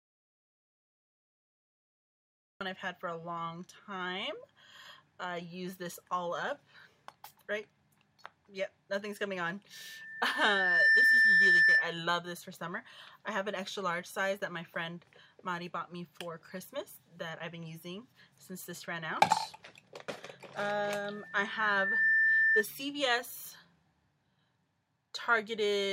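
The clip opens in an audio dropout to silence that is already under way at 0.0 s and lasts until 2.61 s. The gap is silence with no room tone or hiss underneath, and the sound then starts abruptly mid-flow. That pattern most likely comes from the input being lost upstream, through a disconnected source, a broken link or a mute, while the recorder kept writing silence. Whatever occurred during those first seconds is not recoverable.

From 9.73 s to 12.06 s there is a loudspeaker feedback squeal centred on a single tone at 1.8 kHz. It grows out of the programme over roughly a second and settles around 10 dB above the wanted sound, dominating it as a sustained whistle. The microphone was picking up its own loudspeaker, and at 1.8 kHz the loop gain exceeded unity, so that frequency kept reinforcing itself.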